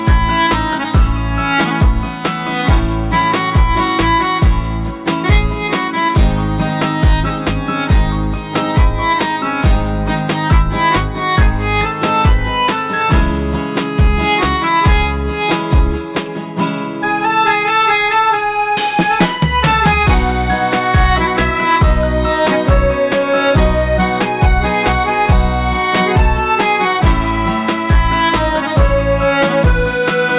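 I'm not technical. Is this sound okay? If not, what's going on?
Yes, nothing in this audio points to a technical fault, so there's nothing here to fix.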